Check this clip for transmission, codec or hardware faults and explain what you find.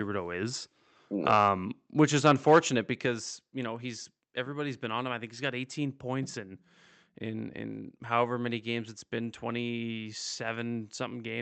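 Two microphone-stage faults are audible, heard over a call-codec path whose content stops near 8 kHz.

Microphone overload, 1.3 to 1.44 s and 2.25 to 2.59 s: the likely cause is input gain set so high that peaks ran about 3 dB past the converter's limit, flattening their tops. This adds a crackling edge to the loudest speech, with a larger share of the waveform clipped in the longer second event.

Microphone volume stepped down, 3.06 s: the likely cause is call software reacting to that overload by lowering the device's input gain in one step of about 5 dB. Speech and background drop together, abruptly, roughly half a second after the second clipped stretch.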